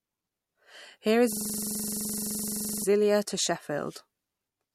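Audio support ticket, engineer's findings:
System hang loop, 1.33–2.84 s in speech. Single 42.7 ms slice repeats exactly, about 35 times, giving a rough stutter-buzz at 23.4 Hz. Probable component: driver/host stall. Output hardware kept replaying its ring buffer, consistent with a 2048-sample buffer.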